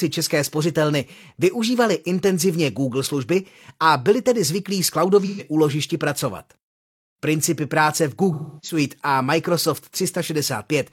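Speech, with two stretches of AAC frame loss with concealment, from 5.25 to 5.42 s and from 8.33 to 8.78 s. In each, the decoder fills the missing audio by reusing the last good spectrum, so the speech turns smeared and phasey instead of cutting out. The first loss fits about three lost frames, the second about seven. Unlike a plain dropout, there is no hard silence or click, only a blurred, synthetic-sounding patch.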